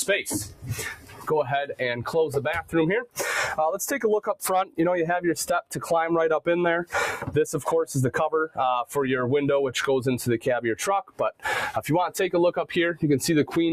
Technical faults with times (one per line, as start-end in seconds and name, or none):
0.00-13.72 noise suppressor applied to music or sounds
0.44-0.66 sound cut by the noise suppressor
0.93-1.30 sound cut by the noise suppressor
5.62-5.89 sound cut by the noise suppressor
7.17-7.33 sound cut by the noise suppressor
11.03-11.45 sound cut by the noise suppressor